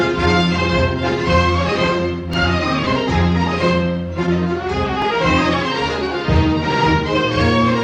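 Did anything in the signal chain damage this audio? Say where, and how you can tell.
Yes. Overlapping chunks, at the buffer or block-processing stage, cause brief stutters at 2.34 s and 5.02 s. Each new 3.0 s chunk begins before the previous one finished, so about 6.5 ms replays. A waveform shows a repeated fragment with a step at the seam. A spectrogram shows a thin vertical click line.

Damaged data in a compressed stream, at the codec or storage stage, produces a short glitch from 2.83 to 2.87 s. The decoder hit corrupt frames, lost sync and resumed at a later frame header. A spectrogram shows a brief disruption. The waveform jumps discontinuously there.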